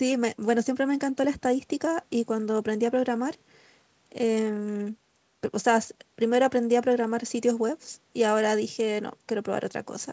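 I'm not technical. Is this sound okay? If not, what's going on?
Yes, there are no faults.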